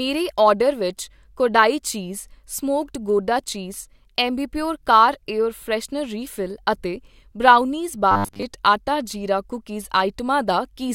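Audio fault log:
8.12–8.43 s, robotic sound from repeated short buffers: the speech turns into a rigid, metallic buzz pitched at 100 Hz that only loosely tracks the words, likely because audio arrived too slowly and a roughly 10 ms buffer was replayed over most of this stretch.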